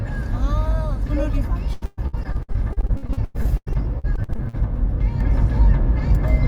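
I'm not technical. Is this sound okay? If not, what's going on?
No, there are two problems. From 1.73 to 4.55 s there's repeated packet loss (robotic sound): about thirty tiny dropouts, the longest around a tenth of a second. Each hole gets patched by stretching the sound just before it, so that stretch turns choppy and robotic.

Then at 5.21 s there's a sudden gain jump. Everything, background noise included, steps up noticeably louder in one instant and stays that way to the end. That's likely a volume setting being switched on at once instead of faded in.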